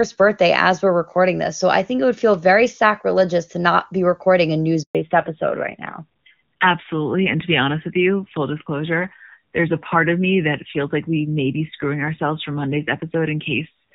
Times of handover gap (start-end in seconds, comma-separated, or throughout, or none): 4.83-4.95